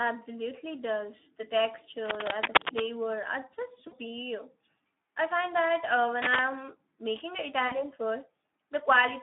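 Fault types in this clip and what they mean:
Speex codec: A low-rate CELP coder starves the excitation, leaving the speech hoarse and noisy within a 250 Hz to 3.5 kHz band, consistent with roughly 11 kbps.
Cable scratch noise: A worn cable or connector likely shifted contact, adding rough scratching bursts louder than the speech near 2.0 to 2.8 s and after "I find that uh".
VoIP packet loss concealed by the speech codec: The decoder bridged lost audio by extrapolating, giving fading smears near 3.87 and 7.67 s, each about 40 ms, suggesting two lost frames.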